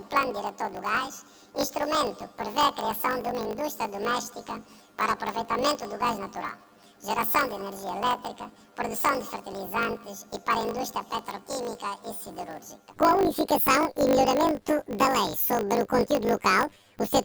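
Throughout, planar audio is read as interleaved. Each 20 ms block replays at double speed, producing a robotic 50 Hz buzz rather than a clear octave shift.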